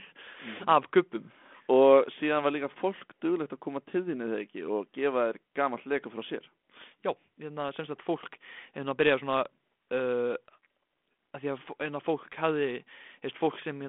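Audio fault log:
The speech passes through G.726 ADPCM coding at 32 kbit/s in a telephone band of about 200 Hz to 3.5 kHz, with nothing above 3.8 kHz and only light coding roughness, as expected for that path.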